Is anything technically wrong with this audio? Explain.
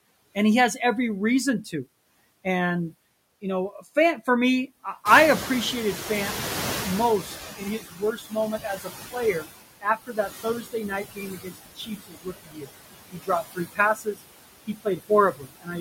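Yes, a noise suppressor is at work and it leaves audible traces.

Noise suppressor artifacts run through the whole clip. The suppressor lowers bands it judges to be steady noise, by about 19 dB, frame by frame, so the background sinks between phrases and rises under speech. On a spectrogram the noise floor looks patchy and flickering rather than even.

The noise suppressor catching up happens from 5.05 to 7.82 s. Around 5 s the room noise jumps by about 17 dB, and the suppressor's estimate lags, reducing it by only about 14 dB at first. Over 2.77 s the noise sinks as the estimate adapts, which a spectrogram shows as a bright band fading downward.

Speech is cut by the noise suppressor in four stretches: 7.56 to 9.46 s (deepest drop about 18 dB), 9.81 to 12.69 s (about 21 dB), 13.11 to 14.21 s (about 20 dB) and 14.67 to 15.76 s (about 18 dB). The affected parts add up to roughly three seconds, with the 9.81 s stretch accounting for about half of that. 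After the rise, the louder room noise sits only about 11 dB below the speech, so the suppressor mistakes soft speech for noise and turns it down. Consonants and word endings sound swallowed. In the waveform the envelope shows sudden dips, and on a spectrogram high-frequency consonant energy goes missing.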